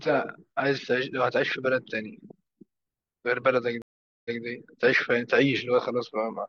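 At 3.82 s a stream reconnect silences the speech for 0.43 s, then resumes 0.17 s earlier, repeating a fragment, which a plain dropout would not.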